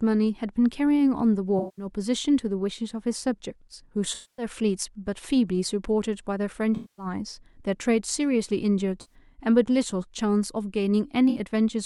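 Speech with five short patches of AAC frame loss with concealment, at 1.59–1.86, 4.14–4.46, 6.75–7.06, 9.01–9.14 and 11.29–11.39 s. Each gap, roughly 64 to 235 ms long, is filled by the decoder repeating the last good spectrum with scrambled phase, so it sounds smeared and noisy rather than silent. That sets it apart from a plain dropout, which would leave a hard hole or click.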